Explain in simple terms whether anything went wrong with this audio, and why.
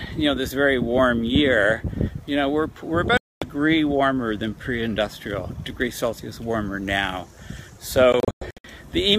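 The sound cuts out twice, most likely a Bluetooth dropout: audio packets didn't reach the headphones in time. There's one clean gap from 3.17 to 3.44 s, then a choppy stretch from 8.13 to 8.68 s with several brief holes. Each time it picks up further along, as if it had kept playing.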